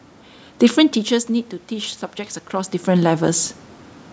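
From 0.75 to 3.56 s there's automatic gain rising. The level at the mic drops by about 12 dB as the talker drifts off around 1 s, and the gain control slowly claws back about 4 dB, so voice and room noise swell up together.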